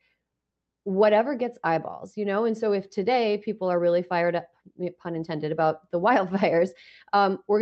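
Clock drift between sender and receiver runs throughout: the sender's clock is about five percent fast, so the receiver's jitter buffer keeps overfilling and small uneven timing hiccups recur. From 0.14 s to 7.61 s, repeated timing corrections trim short pieces to keep pace, making the speech play about 5% fast.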